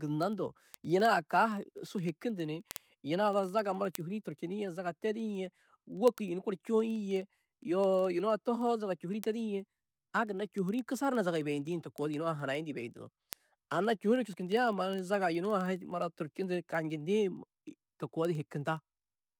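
A receiving device running on its own clock, not locked to the sender's digital link, produces word clock ticks from 0.12 s to 19.39 s. The two clocks differ by roughly 400 ppm, so they slip past each other about every 50 ms. At each slip a few samples are misread and a single sample is dropped or repeated. The speech carries a steady train of ticks, around twenty per second, that lasts the entire clip.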